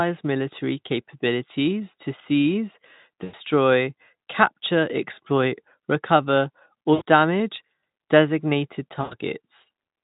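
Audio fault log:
3.23–3.34 s, 6.93–7.03 s and 9.02–9.14 s: VoIP packet loss concealed by the speech codec. About 100 ms, 80 ms and 100 ms of the stream went missing. The Speex decoder filled each hole by repeating its last pitch and spectral shape at falling gain, so the speech smears into a fading buzzy tone or coloured noise. Unlike a plain dropout, there is no silent gap or click, and the speech stays weak or distorted just after each hole while the decoder's state rebuilds.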